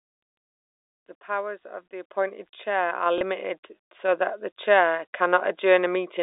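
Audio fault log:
2.04 s and 3.06 s: microphone volume stepped up. Right after "powers of the", the input gain jumps by about 6 dB in a single step, and at 3.06 s it rises again by about 4 dB. Voice and background get louder together, with no ramp, which points to the call software raising the device's input volume because it judged the microphone too quiet. Each level change is heard as a sudden shift in loudness.
3.18 to 3.21 s: packet loss with last packet repeated. About 30 ms of audio is missing, which fits a single lost 30 ms packet. The receiver fills the gap by replaying the last packet it got, and this single repeat is heard as a small blip. It comes just after the second gain step, while the line stays limited to roughly 300 Hz to 3.7 kHz.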